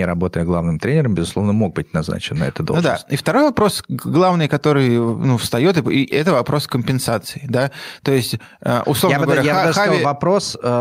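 Throughout, the gain swings by around 5 dB: gain pumping, likely from excessive input gain driving a fast limiter.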